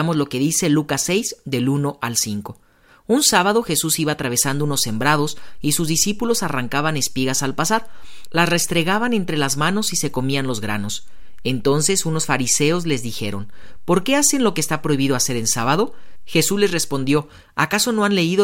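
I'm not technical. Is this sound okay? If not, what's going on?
No. A low thump at about 4.45 s and another at 17.17 s, while the speech carries on unchanged. This is a DC step: the waveform's zero line jumps to an offset, holds there, then drops back at 17.17 s.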